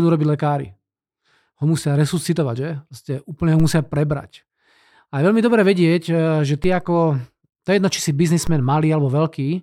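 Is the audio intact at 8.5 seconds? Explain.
No: at 8.47 s a DC step shifts the zero line by about -15 dBFS, then decays slowly, giving a low thump under the speech.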